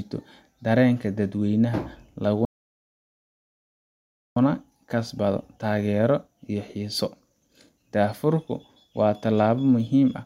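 At 2.45 s the speech cuts off in mid-flow and a playback stall leaves about 1.9 s of silence until 4.37 s, likely because the player ran out of buffered data or its thread was blocked. The waveform shows a flat gap; the spectrogram, a blank column.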